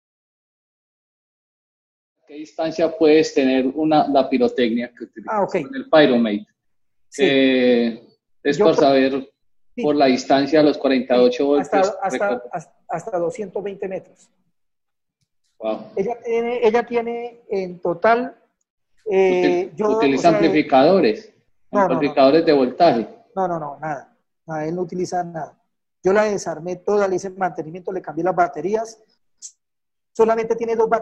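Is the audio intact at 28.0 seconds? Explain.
Yes, the audio is intact at 28.0 seconds, with no fault audible at that moment.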